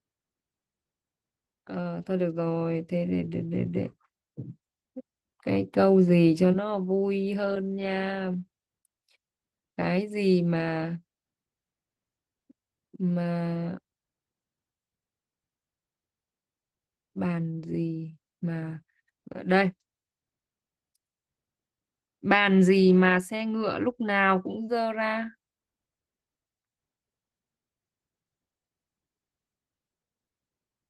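The speech has been squeezed through Opus voice compression from start to finish, in its hybrid arrangement: a SILK linear-prediction layer handles the lower band while a CELT layer covers content above 8 kHz, in 20 ms frames. The damage is plainly audible, consistent with a bitrate around 16 kbps. With so few bits, the excitation is coded coarsely, leaving the voice hoarse and slightly robotic.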